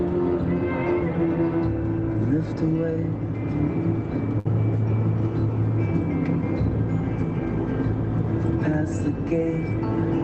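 The audio passes through a call codec, consistent with Opus, with content above about 8 kHz cut off. At 4.39 to 4.47 s a burst of packet loss strikes. The receiver stretches the last sound for about 56 ms and fades it, then resumes with roughly 60 ms missing. A spectrogram shows a smeared, fading band ending in an abrupt jump, and the waveform shows a decaying, repetitive stretch.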